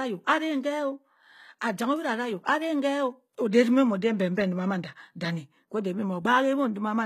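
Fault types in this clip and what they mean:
HE-AAC compression: the treble sounds synthetic, with s sounds turned gritty and lispy and nothing above about 14.9 kHz; the likely cause is a low-bitrate HE-AAC encode, around 20 kbps, rebuilding the upper band from copied lower bands.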